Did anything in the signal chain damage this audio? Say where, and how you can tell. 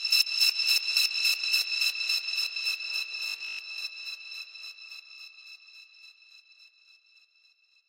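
Yes. From 3.29 to 3.59 s the sound turns into a rigid, metallic buzz at 50 Hz, with most of that stretch filled by repeats. This is robotic sound from repeated short buffers, likely at the driver or buffer stage: audio arrived late, so the last 20 ms block was replayed in place of the missing material.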